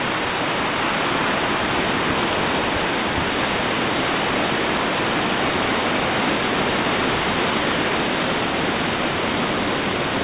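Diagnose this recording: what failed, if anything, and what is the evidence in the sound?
A block size mismatch (truncated) runs throughout, at the driver or buffer stage. A steady buzz near 91.9 Hz sits under the sound, and everything plays 1.07 times fast at nearly normal pitch. One stage writes longer blocks than the next reads, which fits 512-sample blocks, and each block's tail is discarded.

A jitter buffer speed-up, at the network and call-processing stage, runs from 7.90 s to 10.24 s. The sound runs faster, at about 104% speed, without a pitch change. The receiver trimmed short pitch-period slices, about a tenth of a second in total, to drain excess buffered delay. Through the G.711 A-law call path, nothing is heard above 4 kHz.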